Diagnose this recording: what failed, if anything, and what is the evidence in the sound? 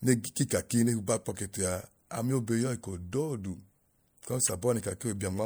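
The failure sits in the codec stage: corrupt frame decoded. In this speech recording a brief, faint glitch sits at 2.61 s, spanning what sounds like a couple of frames. A louder, longer glitch runs from 4.45 to 4.53 s, covering a few frames. In each, damaged bits were decoded as if valid, so misread gains and codes pushed energy into frequencies the signal never had, lasting only as long as the affected frames.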